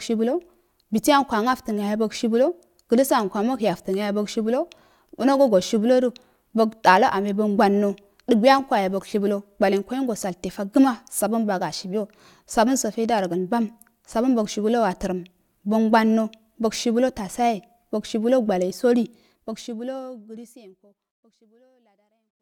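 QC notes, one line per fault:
No faults found.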